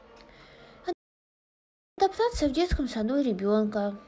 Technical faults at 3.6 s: none

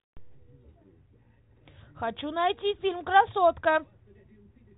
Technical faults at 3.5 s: none

